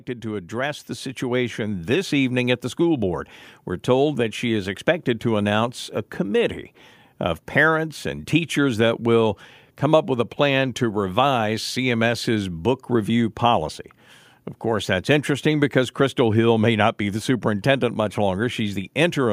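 From 0.21 s to 8.35 s the clip shows automatic gain rising: the gain control judged the input too quiet and raised its gain step by step, adding about 8 dB by the time "that will come up" is heard. Because the gain applies to the whole signal, the speech and the background noise grow louder together. On a waveform the envelope widens steadily across those eight seconds, and a spectrogram shows the noise floor brightening along with the speech.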